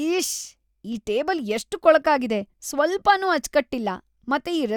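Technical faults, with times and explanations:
No technical faults are audible in this speech.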